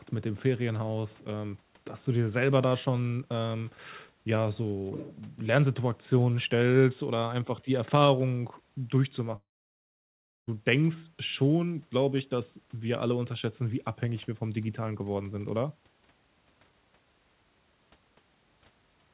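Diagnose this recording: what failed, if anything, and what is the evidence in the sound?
The speech drops out from 9.36 to 10.49 s, at the network stage. A short fading fill gives way to about 1.03 s of silence. The speech then resumes further on, with about 1.12 s missing. The likely cause is a long network dropout.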